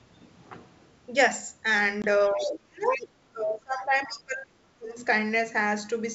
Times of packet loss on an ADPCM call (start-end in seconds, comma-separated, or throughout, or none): 2.02-2.05